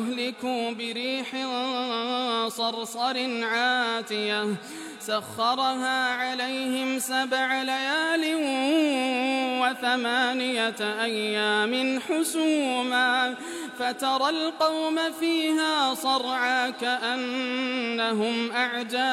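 No technical fault can be heard in this audio. There is nothing to place at any point in it and no cause to point to.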